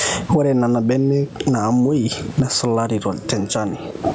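Throughout this speech clip, loud and soft passages are squashed toward one level: gain pumping. The likely cause is input gain set far too high, with a fast limiter or compressor repeatedly pulling it down by around 20 dB. The faint room noise sits about 37 dB below the speech, and the call's microphone processing caps the top end at 8 kHz.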